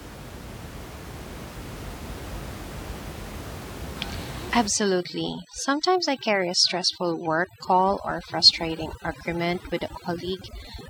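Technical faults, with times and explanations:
4.68 s to the end, overdone noise removal: a noise reduction stage is set too aggressively, pushing individual frequency bands down toward silence wherever they sit close to its noise estimate. The room noise, about 11 dB below the speech, collapses into near silence with twinkling specks, and quieter speech components vanish with it.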